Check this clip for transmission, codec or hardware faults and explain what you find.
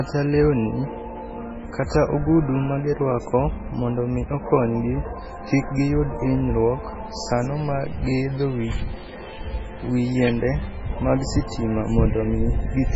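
The speech carries one fault for its whole length: transcoding between lossy codecs. The chain likely began with a very low-rate encoder, which fits MP3 at around 16 kbit/s, and was then re-encoded with AAC-LC at what sounds like 64 kbit/s. The second codec spends bits faithfully reproducing the first one's smearing and adds its own coding noise. The band stays capped from the first stage, with nothing above 7.6 kHz, so the speech sounds dull and layered with mixed artefacts.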